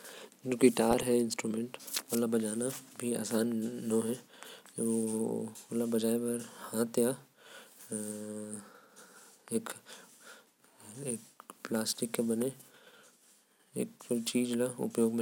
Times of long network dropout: none

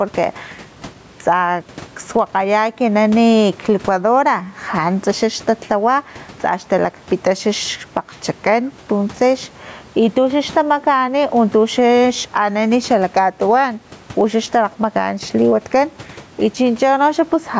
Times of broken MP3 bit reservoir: none

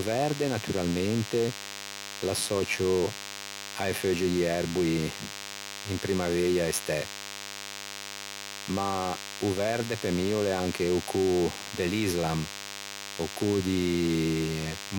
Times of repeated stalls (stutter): none

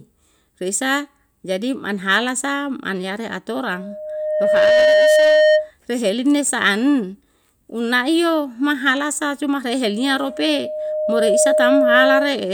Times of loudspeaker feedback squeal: 3.72-5.71, 9.89-12.45

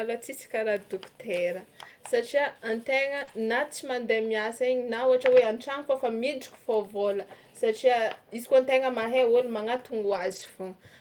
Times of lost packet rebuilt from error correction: 3.27-3.29, 5.35-5.45, 10.03-10.49

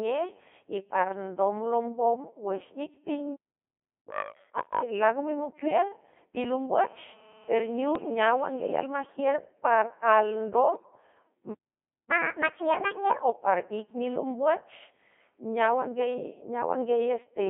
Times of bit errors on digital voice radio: 5.66-5.77, 7.95-8.09, 10.75-10.91

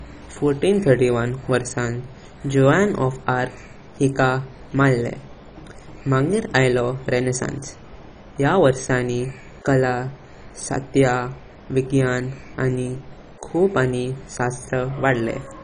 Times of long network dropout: none

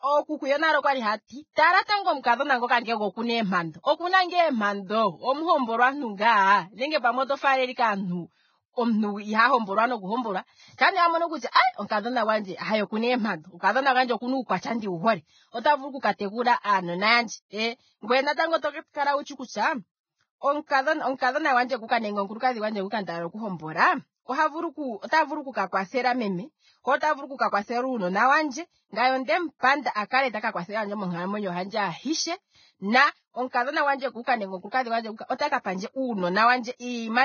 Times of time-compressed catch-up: none

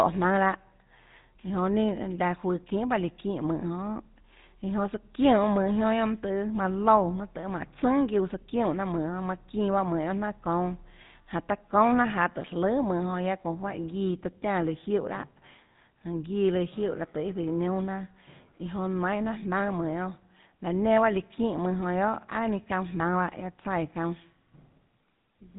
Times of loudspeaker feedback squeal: none

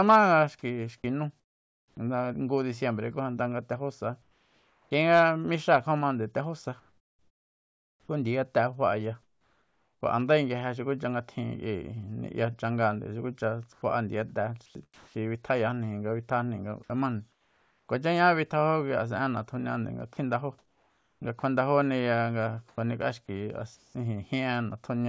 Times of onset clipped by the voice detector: 1.91-1.97

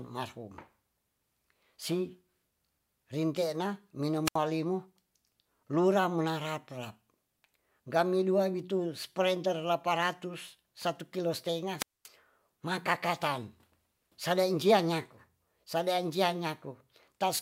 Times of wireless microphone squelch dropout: 4.25-4.37, 11.77-12.08

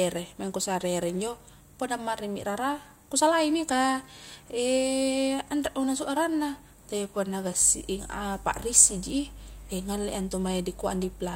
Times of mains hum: 7.62-11.35

